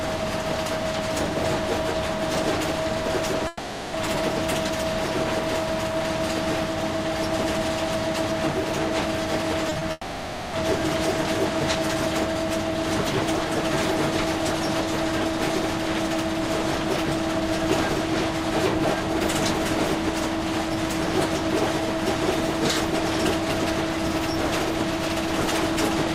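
From 3.47 to 3.95 s, a long network dropout is the likely cause: the last sound is stretched into a fading buzz or hiss for nearly half a second, and the audio resumes with that stretch lost. At 9.69, 9.73 and 9.79 s, short concealed packet loss leaves brief smears, each covering only hundredths of a second and blending straight back into the real audio. From 9.91 to 10.55 s, a second long network dropout is likely: the filled tail runs for about 0.6 s and thins to a brief silence, which is far longer than those quick patches.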